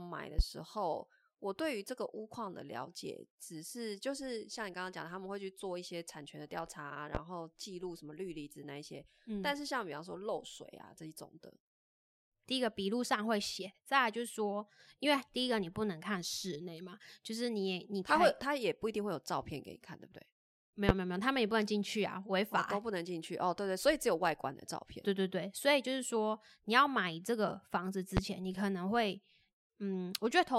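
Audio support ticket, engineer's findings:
Loud pop, single sharp thump, 0.39–0.42, 7.15–7.18, 20.89–20.93, 28.17–28.20 s, about 15–25 dB over speech. Likely voltage spike from plug, switch or static.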